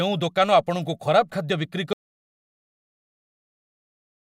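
At 1.93 s the speech cuts out mid-flow into an audio dropout to silence, dead silence with no room tone, running to the end, likely a lost input feed.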